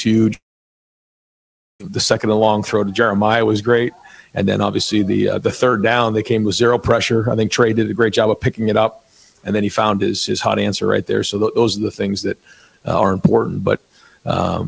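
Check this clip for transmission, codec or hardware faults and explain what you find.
One fault is present. From 0.34 to 1.82 s there is a long network dropout, likely from incoming audio stopping: concealment briefly stretches the last sound into a fading buzz, then silence holds for about 1.4 s before the audio resumes with that stretch missing. The long gap of near-silence sets it apart from a brief packet-loss glitch, which is concealed smoothly within tens of milliseconds. Across the clip, the call codec's band limit leaves nothing above 8 kHz.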